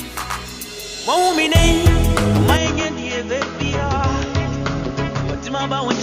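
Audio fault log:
2.57 s to end, input switched to a poorer device: the sound abruptly turns duller and quieter, with no gap at the change, nothing above 7 kHz, a level drop of around 5 dB and a new noise floor about 30 dB down, likely from capture moving to a narrower-band microphone.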